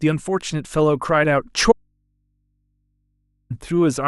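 An audio dropout to a faint residue runs from 1.72 s to 3.50 s, cutting the speech off abruptly for about 1.78 s. The gap holds only a low mains hum, roughly 50 dB below the speech, rather than silence. The signal was likely lost upstream while the rest of the chain stayed live, so the open input kept passing hum. The speech then returns just as suddenly, with no fade at either edge.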